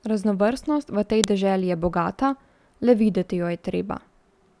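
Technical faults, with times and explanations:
1.24 s, file header played as audio: a single sharp, loud click cuts into the speech just before "deželi je". A second file was joined here with its header left in, so those few dozen bytes of metadata play as raw samples. They form a brief, harsh spike unrelated to the surrounding signal.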